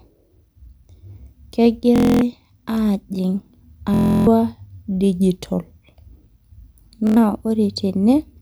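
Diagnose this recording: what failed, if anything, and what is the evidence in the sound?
Bluetooth stutter on the wireless link: packets arrived late or were lost at 1.96–2.21 s, 3.94–4.27 s and 7.07–7.17 s, so the receiver replayed its last buffer. The spectrogram shows repeating vertical stripes.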